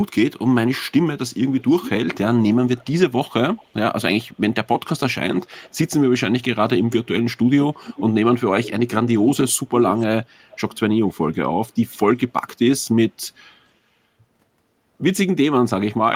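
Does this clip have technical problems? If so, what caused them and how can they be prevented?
Yes. There is an echo leak in two stretches of this speech, from 0.88 to 5.75 s and from 6.91 to 12.49 s. A faint delayed copy of the voice trails the original. It arrives about 0.43 s late in the first stretch, sitting about 20 dB under the speech. In the second it comes about 0.45 s late and is louder, around 15 dB down. The likely cause is a far end playing the call on a loudspeaker, with its echo canceller failing to remove what its microphone picked up. To prevent it, the far side should use a headset or a better-tuned echo canceller.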